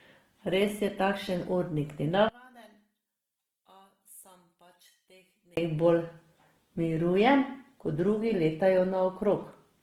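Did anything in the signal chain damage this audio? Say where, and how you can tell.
Yes. The codec stage damaged the whole clip, and the speech sounds like Opus compression, likely from its music (CELT) mode. The bandwidth stays full, with content reaching about 20.1 kHz. But the detail is grainy and rough, and the harmonics turn noisy rather than swirling. Plainly audible damage at full bandwidth fits a low bitrate around 16 kbps. There, the encoder keeps each band's energy but fills starved bands with folded or noise content.

The wiring or channel routing caused a second fault: one channel inverted, likely through a polarity flip in one leg. From 2.29 s to 5.57 s, just after "je takšen urnik", the level falls by about 28 dB on mono playback. The centred speech nearly disappears. What remains is only the faint difference between the two channels. The two sides share the same signal, so it cancels when they are summed.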